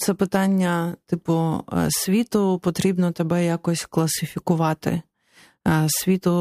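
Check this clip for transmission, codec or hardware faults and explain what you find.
No transmission, codec or hardware faults detected here.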